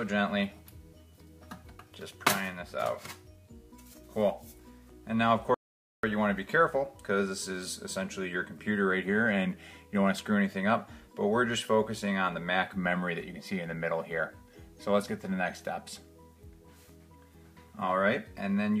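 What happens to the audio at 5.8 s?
An audio dropout to silence runs from 5.54 to 6.03 s: roughly half a second of silence, likely a lost input. It shows as a flat waveform and blank spectrogram with no room tone.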